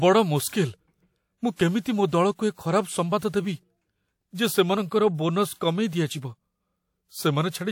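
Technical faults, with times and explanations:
0.48–0.53 s, 1.80–1.85 s and 5.56–5.61 s, pre-echo: a short hiss of about 45–51 ms runs ahead of each sharp speech onset, because block-wide quantisation noise leaks before the attack and smears it.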